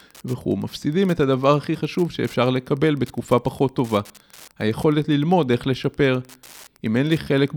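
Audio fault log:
throughout  Wi-Fi interference: a faint, steady ticking just under ten times a second runs beneath the speech at about 30 dB below it. A nearby Wi-Fi radio's beacon, repeating every 102.4 ms, is being rectified by the audio circuit into brief clicks. On a spectrogram it shows as thin, evenly spaced vertical broadband lines. On the waveform, small regular spikes stand out most clearly in the pauses between phrases.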